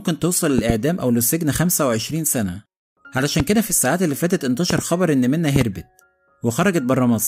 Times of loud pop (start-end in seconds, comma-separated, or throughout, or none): 0.58-0.72, 3.40-3.42, 4.70-4.81, 5.56-5.63